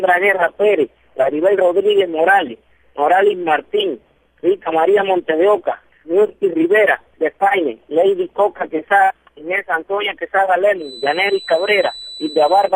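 From 10.76 s to the end, a thin 4 kHz feedback whistle sits about 20 dB down. Likely cause: a speaker-microphone loop short of runaway.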